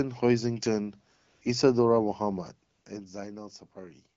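From 1.15 to 1.41 s the clip drops into AMR comfort noise. For about 260 ms the phone treated the talker as silent and stopped sending speech frames, and the receiver filled the gap with synthetic noise built from a rough level and spectrum estimate. The real background gives way to a flat, even hiss that switches in and out abruptly. The same thing recurs from 2.73 to 2.85 s, this time for about 120 ms.

Between 2.39 and 3.24 s there is zipper noise. The level falls by roughly 10 dB, applied in unsmoothed 3 dB steps at about four steps per second. Each jump leaves a small click, so the fade carries an audible ticking. The second comfort-noise gap lands inside this span. Outside these events the sound has the light coding character of AMR wideband, which fits a rate around 12.65 kbit/s.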